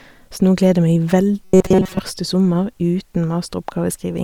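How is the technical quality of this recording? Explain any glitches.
One glitch stands out: robotic sound from repeated short buffers between 1.44 and 1.99 s, ending just before "sommer uten". The speech there becomes a rigid, metallic buzz pitched at 188 Hz that still roughly tracks the syllables. The likely cause is audio arriving too seldom, with a segment of about 5.3 ms replayed over most of that stretch to fill the gaps. Unlike a dropout, nothing goes silent. The fixed buzz pitch sets it apart from ordinary distortion.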